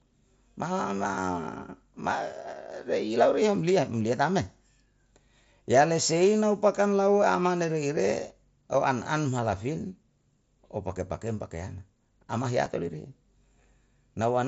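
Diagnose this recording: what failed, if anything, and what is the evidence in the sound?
Concealed Bluetooth headset packet loss at 8.73 s, after "pakam lau amane reire", and 12.65 s: the wireless link dropped 7.5 ms, one frame's worth, refilled from recent waveform.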